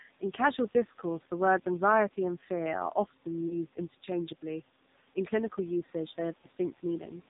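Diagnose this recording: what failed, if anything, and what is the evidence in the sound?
AMR narrowband mobile codec, throughout: a codec-stage fault. Nothing passes above 4 kHz and the speech is heavily buzzy and synthetic, which fits AMR-NB's low 5.9 kbps mode.

Lost AMR speech frames at 3.48 to 3.57 s and 6.42 to 6.46 s: a network fault. Each is a brief dip or warble as the decoder reused its last pitch and vocal tract settings at falling gain, consistent with one dropped 20 ms frame.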